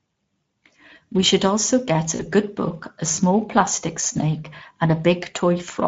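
Speech, coded throughout with the Speex codec. It sounds hoarse and grainy, and the highs are a hazy noise fill, which fits a low bitrate near 17 kbps. VoIP packet loss concealed by the speech codec occurs from 2.15 to 2.22 s. About 40 ms goes missing, which fits two lost frames. The decoder stretches the last sound and fades it out, and the sound stays weak or distorted briefly afterwards.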